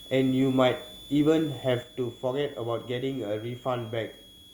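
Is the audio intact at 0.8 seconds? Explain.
No, a switching supply whistle runs through the whole speech clip, including 0.8 s: a high tone wandering between 3.3 and 3.5 kHz, roughly 20 dB below the speech, from a power supply cycling at an audible rate.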